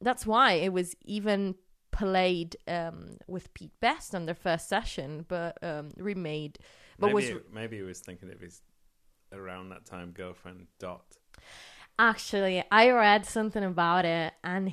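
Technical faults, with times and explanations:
No technical faults can be heard anywhere in this speech recording.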